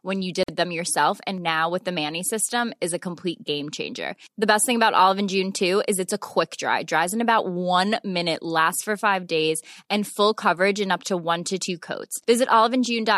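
At 0.43 s, just after "when you", the speech drops into a silence about 51 ms long. This is a gap at a join of encoded pieces. The audio was encoded in separate sections and then joined without trimming. The encoder's start-up delay and the padding in its last frame both stayed in. The edges of the silence are smeared by the codec. At 0.48 s the speech resumes with "them yourself and now", carrying on from where it stopped.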